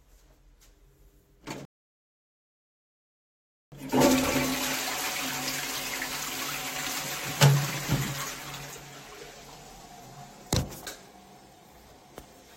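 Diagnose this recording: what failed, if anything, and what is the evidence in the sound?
A rebuffering stall in playback delivery: at 1.65 s the sound drops to silence and does not return until 3.72 s. It then resumes exactly where it stopped, with nothing skipped, so about 2.07 s is added to the timeline. The player's downloaded buffer ran dry, and output halted until more data arrived. On a waveform this shows as a flat, silent gap. On a spectrogram it is a blank vertical band with matching content on both sides.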